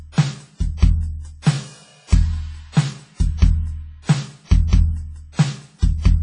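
From start to finish the music carries heavy codec damage, likely from WMA compression at a low bitrate in the region of 24 kbps. Long transform blocks smear quantisation noise across tens of milliseconds, so attacks ring and sustained passages sound washy, with a hiss that breathes with the signal. A spectrogram shows a flat ceiling with nothing above 10.4 kHz, plus dropouts and gaps where weaker partials were zeroed.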